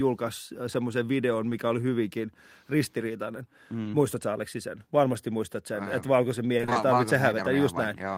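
Right after "semmoisen videon", at 1.49–1.53 s, there's a short concealed packet loss: about 20 ms of the call arrived too late, and the receiver papered over it by extending the previous sound before blending back in, leaving a small smear before "oli hyvinkin ristiriitainen". The same thing happens again at 3.83–3.87 s.

Between "että valkoisen" and "ei tarvitse", from 6.57 to 6.77 s, you get repeated packet loss with that robotic sound. What sounds like five short holes, none longer than 20 ms, follow one another closely, so about half of that stretch is patched-in sound. It comes out choppy.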